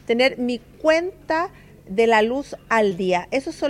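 Right around 2.89 to 2.93 s there's a short concealed packet loss. About 20 ms of audio never reached the decoder in time, so the receiver papered over the gap, extending the last bit of sound for roughly 14 ms before easing back into the real signal. You hear it as a quick smear or wobble.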